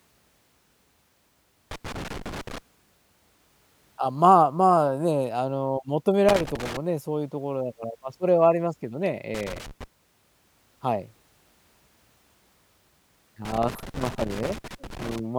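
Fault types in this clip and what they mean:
Loose connector crackle: a worn contact making and breaking, heard as four irregular scratchy bursts in this speech, unlike evenly spaced digital clicks or clean dropouts.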